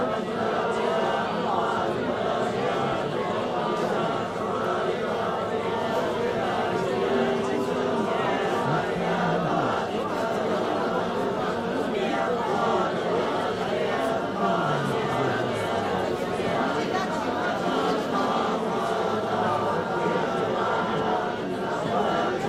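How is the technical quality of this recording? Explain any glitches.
There is one glitch, a call bitrate drop from 8.92 to 13.18 s. The encoder was starved of bits, which fits a fall from about 64 to 27 kbps, so the sound turns coarse for roughly three seconds at its lowest before recovering.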